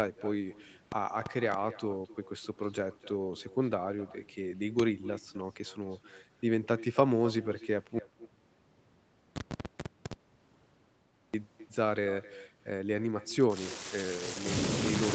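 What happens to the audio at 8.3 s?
At 8.3 s the sound is in the middle of an audio dropout to silence. It cuts out abruptly at 7.99 s and returns at 11.34 s, so about 3.35 s of audio is gone. The gap is digital silence with no room tone or noise floor, which points to the input likely having been lost, through a disconnected device, a failed link or a mute, while the recorder kept writing silence. Nothing from that stretch can be recovered.

On either side of the gap, the echo with no canceller runs through the speech. A quieter, thinner copy trails each phrase by roughly 300 ms at about 17 dB below the direct sound. It comes from the far end's loudspeaker being picked up by its microphone and sent back with nothing removing it. During the dropout itself both the speech and its echo vanish, and the echo resumes along with the speech at 11.34 s.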